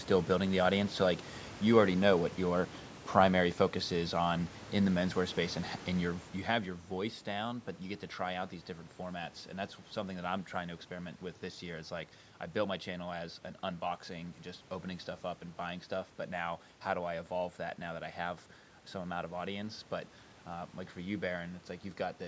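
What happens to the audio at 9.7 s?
Nothing goes wrong at 9.7 s; the speech there comes through intact, with no dropout, glitch or distortion to be heard.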